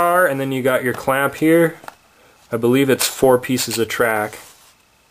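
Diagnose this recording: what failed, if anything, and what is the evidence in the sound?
What failed is the rate conversion stage: imaging from sample-and-hold upsampling across the whole clip. A bright metallic fizz shadows everything, sitting about 19 dB under the signal between 11.03 and 22.05 kHz. That points to roughly 22 kHz material repeated up to 44.1 kHz without smoothing, mirroring the spectrum.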